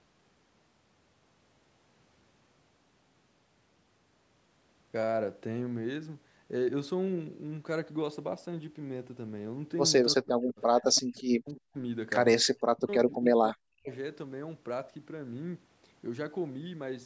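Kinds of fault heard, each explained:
Speech suppressed in double talk: From 10.15 to 11.77 s, then 12.71 to 13.12 s and 13.33 to 13.9 s, the speech dips, falling by about 40 dB at its deepest, with over two seconds affected in total. The likely cause is an echo canceller facing both sides talking at once. It could not separate its own talker from the loudspeaker echo, so it pulled the level of both down together.
Echo leak: Brief scraps turn up at 10.95 to 11.01 s, 11.17 to 11.21 s, 11.49 to 11.59 s and 13.24 to 13.28 s. Each is a faint copy of the speech arriving 330 ms late, roughly 25 to 35 dB below the speech, and fading across the first three. This likely comes from a loudspeaker end whose echo canceller left part of what its microphone picked up in the signal, so it was sent back as these delayed fragments.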